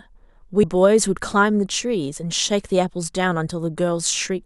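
At 0.63 s, compressed frames are skipped. About two 26.1 ms frames never play, so the speech jumps ahead roughly 50 ms, leaving a brief smeared blip.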